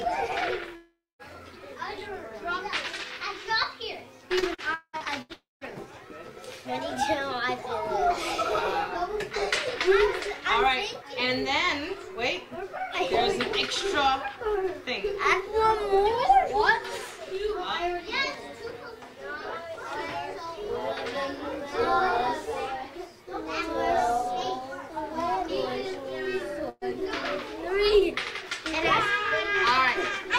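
Right from the start there's a faint tick pattern under everything, a buzz at about 375 Hz that gets louder and quieter with the sound itself. That's a filter restarted on every block: it loses its state at each boundary and starts from silence, so every block opens with a tiny transient. The rate fits a 128-sample block, and because the clicks scale with the audio, they're most obvious in the louder passages.

At 0.75 s the sound smears into a fading buzz or hiss for roughly 440 ms. The last 200 ms or so of that is just silence, and the audio comes back at 1.22 s with that stretch gone. That's most likely a long network dropout. The receiver kept extending the last bit of sound until it had nothing left, then went quiet.

From 4.39 s to 5.68 s it gets choppy and robotic. This is repeated packet loss: seven separate holes, each patched by stretching what came just before. About 400 ms is missing in total, roughly 30% of that span, and the longest hole runs about 190 ms. 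Inside that stretch, from 5.33 s to 5.64 s, there's a longer hole of about 280 ms. It decays through its fill and then sits silent for about 170 ms, again likely a long network dropout rather than just another short gap.

At 26.69 s there's a quick burst of packet loss, about 120 ms. The last sound is held and turned down as it goes, reaching silence for about 10 ms at the end, and the audio picks up again at 26.84 s with that slice missing.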